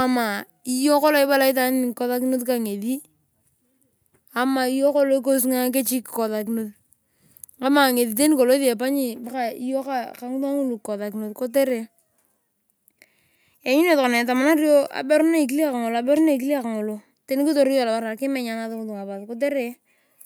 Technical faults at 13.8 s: none

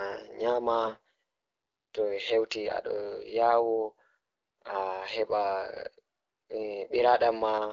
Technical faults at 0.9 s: AMR bit errors

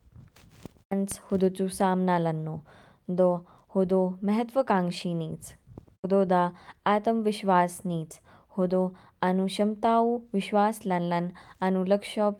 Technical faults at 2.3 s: none

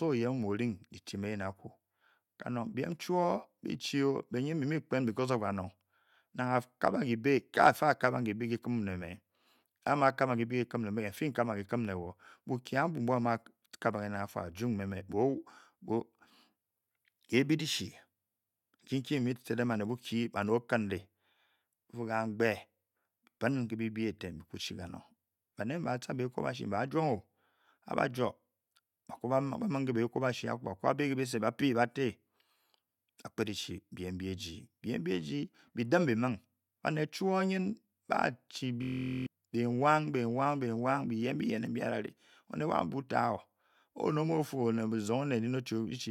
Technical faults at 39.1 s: system hang loop

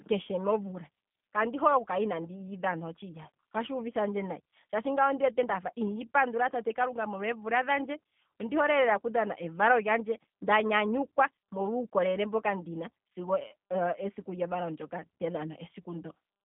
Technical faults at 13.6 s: G.729 codec

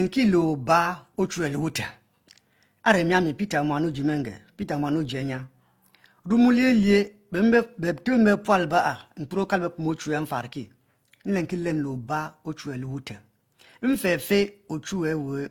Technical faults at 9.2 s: transcoding between lossy codecs

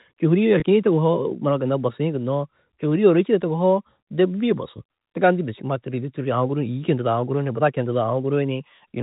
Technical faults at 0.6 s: packet loss with pitch repetition

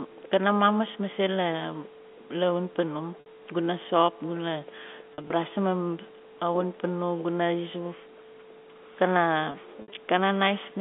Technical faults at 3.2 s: packet loss with pitch repetition

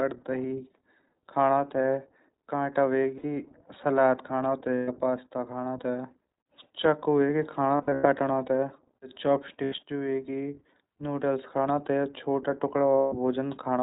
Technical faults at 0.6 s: iLBC codec

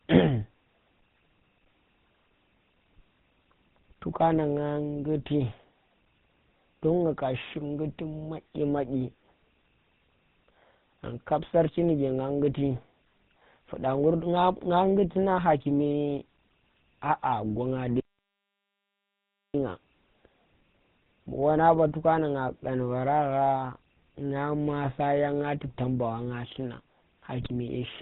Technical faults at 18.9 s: GSM full-rate codec; audio dropout to silence

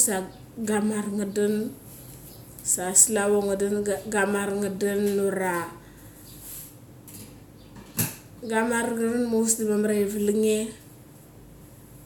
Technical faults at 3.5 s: none

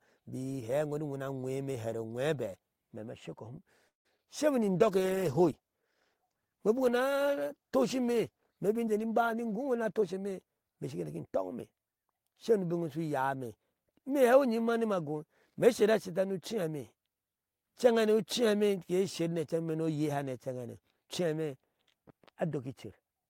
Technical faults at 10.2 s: call bitrate drop; jitter buffer speed-up

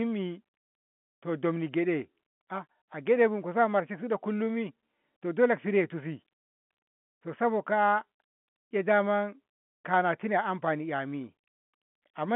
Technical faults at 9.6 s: none

